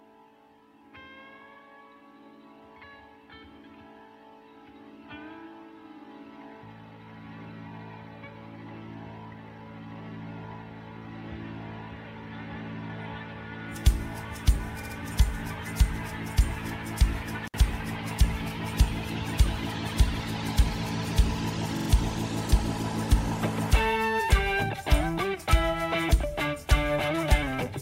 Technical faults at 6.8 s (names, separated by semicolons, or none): none